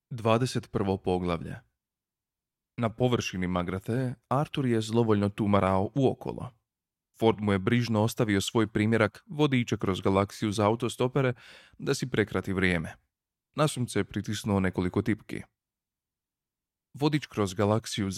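Listening through the speech recording, nothing technical stood out.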